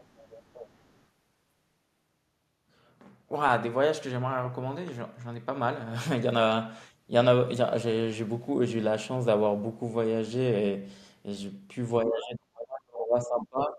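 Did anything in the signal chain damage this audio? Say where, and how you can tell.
Yes, in the call processing. From 0.0 to 1.05 s there's the other side's voice leaking through, faint and well below the main talker. The far end was playing on a loudspeaker and the echo canceller likely didn't fully subtract it from the mic.

From 12.03 s to the end at 13.78 s there's speech suppressed in double talk. The talker's level collapses very deeply in patches adding up to about a second and a half, likely because the canceller heard both sides at once and ducked everything.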